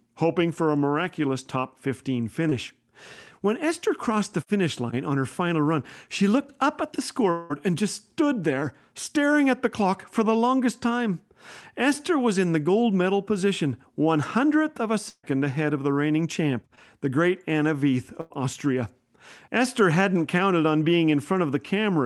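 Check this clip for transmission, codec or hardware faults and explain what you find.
Five packet-loss events interrupt the speech, all on a call path whose audio tops out near 12 kHz, consistent with Opus at a modest bitrate.

At 2.49–2.53 s and 16.75–16.79 s, short concealed packet loss: about 20 ms arrived too late, so the decoder extended the preceding sound, leaving a brief smear.

At 7.31–7.52 s, a long network dropout is the likely cause. About 180 ms went missing, and the decoder bridged it with a synthesized continuation before the audio jumps ahead.

At 15.10–15.25 s and 18.21–18.32 s, a burst of packet loss: 140 ms and 100 ms vanished. The held, fading continuation ends in about 50 ms of silence in the first case.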